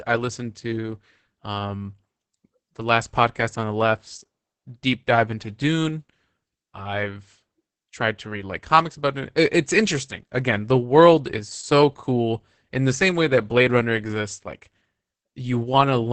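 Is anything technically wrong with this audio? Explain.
Yes, the whole clip carries heavy Opus voice compression. The speech sounds muffled, a bit hoarse and slightly robotic, with nothing above roughly 8 kHz, so it's a wideband signal. That points to Opus running its SILK linear-prediction coder at a low rate, something around 10 kbps with 20 ms frames. At that rate SILK models the vocal tract fine but codes the excitation very coarsely, which is where the rasp and the robotic edge come from.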